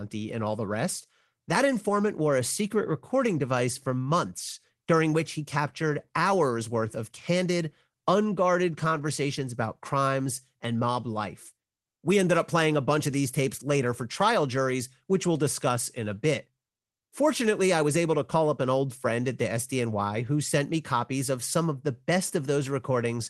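No faults found in the speech; the call path sounds as expected, with the audible band topping out around 12 kHz.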